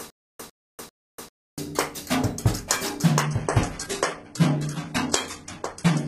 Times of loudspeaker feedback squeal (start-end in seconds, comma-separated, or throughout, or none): none